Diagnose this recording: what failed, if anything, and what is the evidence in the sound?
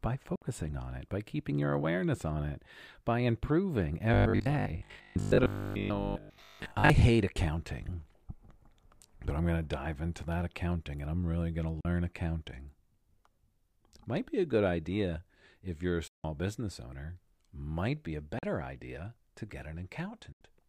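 Short holes of silence with sharp edges cut the speech at 0.36, 11.81, 16.08, 18.39 and 20.32 s, lasting about 61, 41, 163, 41 and 81 ms, and the speech resumes further on each time. This is likely a Bluetooth dropout on the playback link, where late packets were discarded.

From 4.14 to 6.90 s the speech becomes a rigid, metallic buzz at a fixed 50 Hz that still loosely tracks the speech. This is robotic sound from repeated short buffers, likely at the driver or buffer stage. The last 20 ms received is replayed over and over in place of most of the real audio.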